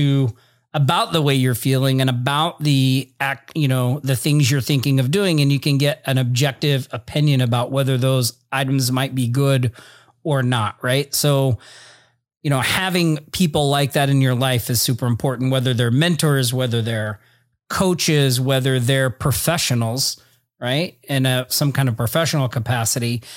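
No technical faults are heard anywhere in the recording.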